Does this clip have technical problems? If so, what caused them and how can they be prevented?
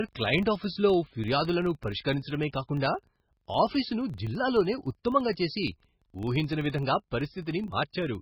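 Yes. The speech is most likely squeezed through MP3 compression at a very low bitrate, which fits something around 16 kbps. Starved of bits, the encoder cuts the treble and zeroes weaker frequency lines, which flicker in and out from frame to frame. Throughout the clip this leaves the speech dull and watery, with a swirling, metallic edge on sibilants and smeared onsets. Encoding at a higher bitrate, or using a codec built for low-rate speech, prevents this.

The second fault is a filter restarted on every block. The filter discards its memory at each block boundary and starts again from silence, so each block opens with a small transient. Across the whole clip this produces a steady buzz at 23.4 Hz, the block rate, which fits a 2048-sample block. The buzz rises and falls with the level of the speech. Carrying the filter's state over from one block to the next prevents it.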